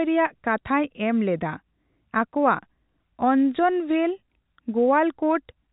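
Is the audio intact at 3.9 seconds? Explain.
Yes, the audio is intact at 3.9 seconds, with the speech carried cleanly through its telephone-band G.711 coding.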